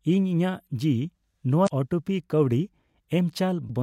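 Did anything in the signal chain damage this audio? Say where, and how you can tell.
Yes. Damaged data in a compressed stream shows up at 1.65 to 1.68 s and again at 3.66 to 3.71 s as brief glitches in the speech. At the codec stage, corrupted bytes made the decoder misread those frames and lose sync before recovering.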